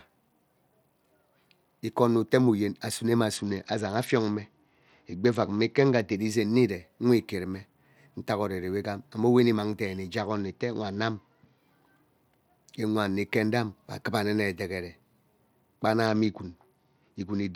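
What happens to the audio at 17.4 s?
At 17.4 s the speech is inside a Bluetooth SBC bit pool drop that runs from 16.06 s to the end of the clip. The encoder has cut its bit budget sharply, which fits a bit pool falling from about 28 to about 9, near 78 kbps. The highest sub-bands get almost no bits. The rest are quantised coarsely. The treble goes dull, and a gritty noise rides over the speech.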